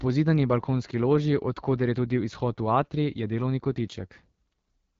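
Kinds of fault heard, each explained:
AMR wideband (HD Voice) codec, throughout: the speech is squeezed through a model of the vocal tract driven by pulses, which carries detail only up to about 6.4 kHz, while the band from 6.4 to 7 kHz is filled with shaped noise and nothing remains above 7.6 kHz. The damage is plainly audible as a rough, raspy edge on the speech, which points to one of the codec's lowest rates, around 8.85 kbit/s.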